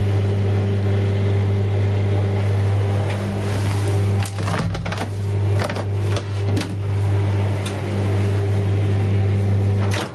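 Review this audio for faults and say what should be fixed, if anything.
Gain pumping runs throughout the clip, from start to end, with the level swinging by something like 15 dB. Loud and quiet events sit unnaturally close together, and everything sounds squashed. The likely cause is input gain set far too high, with a fast limiter or compressor pulling it back down on every peak. The call codec path, which tops out around 12 kHz, is not the source. To prevent it, lower the input gain so peaks stay clear of the limiter, and slow or bypass any automatic gain stage.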